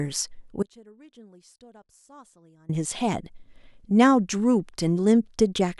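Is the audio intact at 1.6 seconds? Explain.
No. At 1.6 seconds the speech has abruptly collapsed to a faint residue roughly 30 dB below its normal level, inside an audio dropout to a faint residue lasting from 0.63 to 2.69 s. The likely cause is the signal path losing the source while staying live.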